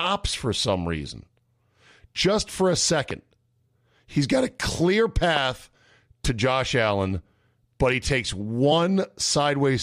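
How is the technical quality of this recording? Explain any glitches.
The recording has two kinds of technical fault: two loud pops and two brief glitches from damaged data in the compressed stream.

Loud pop, at 3.11 to 3.13 s and 5.36 to 5.39 s: a sudden voltage step or pulse, likely from a plug, switch, static discharge or driver glitch, was added to the signal. Each is a single sharp pop over the continuing speech, peaking about 10 dB and then about 15 dB above it.

Damaged data in a compressed stream, at 5.74 s and 8.71 s: corrupted bytes left the decoder misreading frames and losing sync until it found the next valid frame header. Each is a very short blip or chirp, only a fraction of a second long, breaking the speech.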